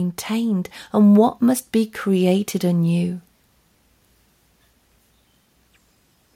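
From 0.27 s to 3.08 s the level climbs by about 5 dB as automatic gain rising takes hold: the gain control judged the incoming speech too quiet and pushed its gain up slowly over nearly three seconds. Voice and background noise swell together at the same rate, which separates it from a speaker simply talking louder. The rise is steady rather than tracking syllables, unlike compressor pumping.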